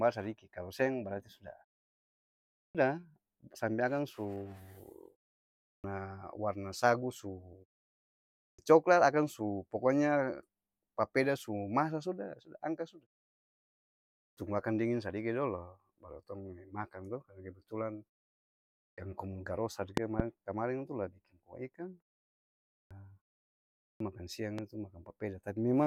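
Clipped start after a pause hits at 2.55, 5.62, 8.36, 14.18 (before "akang dinging sadiki"), 18.75 (before "komu garos satu"), 22.69 and 23.81 s. Each time the output device dozes off during a half-second to 1.2-second gap and loses roughly 0.19 to 0.23 s of onset while it wakes, so the sound jumps in abruptly.

The loud pop comes as a sharp double pop at 19.97 s, just after "komu garos satu", about 20 dB above the signal, and a single smaller one at 24.58 s, about 10 dB up, likely voltage spikes from a switch or driver glitch.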